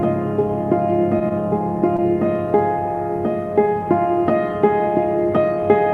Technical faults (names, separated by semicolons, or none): short concealed packet loss